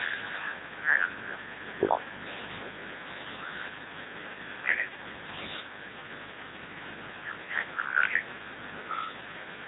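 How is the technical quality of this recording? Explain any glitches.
Technical quality is poor, and it's one problem running through the whole recording: the speech has been through a Codec 2 vocoder. The decoder doesn't keep the original waveform. It rebuilds the voice from sine waves driven by pitch, voicing, energy and a rough spectral envelope. That's why it sounds robotic and buzzy, with heavy damage. The damage fits a very low rate, somewhere near 1.2 kbit/s, and nothing comes through above about 3.8 kHz.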